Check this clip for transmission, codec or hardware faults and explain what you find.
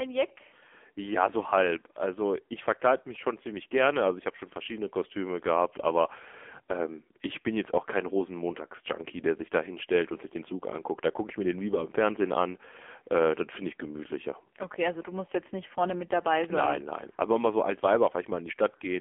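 One fault runs through the whole recording: AMR narrowband mobile codec coding. The speech is squeezed into a phone line band of roughly 250 Hz to 3.4 kHz, with nothing above 3.5 kHz. Each 5 ms stretch is rebuilt from a vocal-tract model and 2 to 10 pulses. The damage is heavy, fitting a low rate near 6.7 kbps, so the voice sounds buzzy and synthetic. A spectrogram shows a hard ceiling near 3.5 kHz and smeared harmonics.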